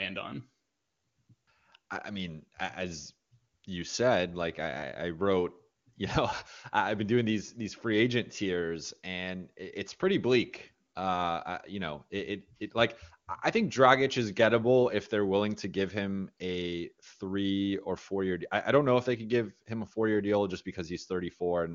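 No technical faults can be heard in the speech, which comes through the AMR wideband (HD Voice) codec at what sounds like one of its higher rates, with any trace of coding damage faint at most.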